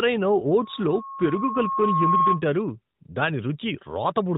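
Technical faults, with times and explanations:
0.59 to 2.43 s, loudspeaker feedback squeal: a single 1.1 kHz tone swells over roughly a second and a half until it sits a few decibels above the speech, then stops at 2.43 s. The microphone was picking up its own loudspeaker, and at that frequency the loop gain passed unity, so the tone kept reinforcing itself. Unlike a steady interfering whistle or hum, it starts faint and climbs in level, and the whole clip has the narrowband, slightly phone-like character of light AMR narrowband coding.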